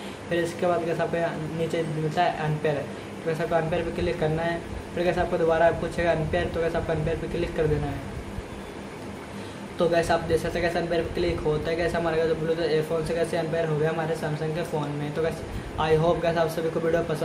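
No technical faults are audible.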